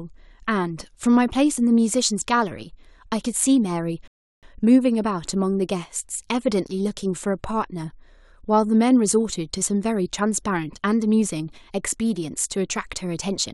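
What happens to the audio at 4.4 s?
At 4.4 s the speech is just coming back from a rebuffering stall that began at 4.08 s and runs to 4.43 s. The player ran dry of downloaded audio, went silent for about 0.35 s, then picked up exactly where it left off, so nothing's missing, just a gap.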